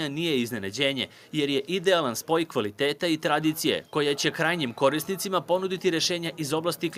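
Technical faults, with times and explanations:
Nothing stood out on listening to this clip.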